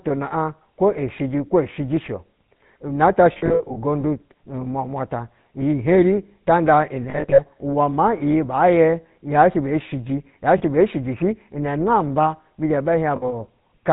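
A buzzy, gravelly roughness runs through the whole of this speech, with nothing audible above 4 kHz and the damage plainly audible. That is the sound of the GSM full-rate codec, consistent with its 13 kbps rate. It models the vocal tract and drives it with a coarse train of regularly spaced pulses, so fine detail in the voice is replaced by that grainy texture. On top of this, the sound briefly locks into a rough, metallic ring at 3.32–3.77 s, 7.10–7.41 s, 10.58 s and 13.16–13.34 s. These are lost GSM frames: the decoder re-uses the last good frame at falling level instead of the missing ones. The first burst is spread over about 0.44 s, the second over 0.28 s and the last over 0.16 s, with the longest runs of lost audio roughly 70, 40 and 70 ms. The 10.58 s dropout is a single short gap, which fits about two missing frames.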